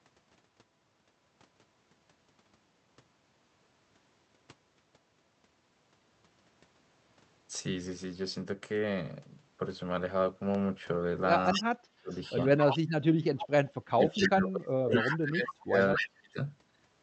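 Speech recorded through a call path with Opus coding and audio band-limited to about 8 kHz carries a single loud pop from 10.55 to 10.57 s, peaking a few decibels above the speech and likely caused by a brief electrical or driver glitch. An echo leak returns the speech as a quieter copy delayed by 251 ms at 11.45, 12.11 to 12.79, 13.38, 14.11, 15.0 and 15.96 s, likely where residual loudspeaker sound escaped echo cancellation. Speech suppressed in double talk occurs from 11.55 to 12.13 s and 13.85 to 16.39 s, with the voice dropping deeply in pieces, likely as the canceller attenuates both talkers at once.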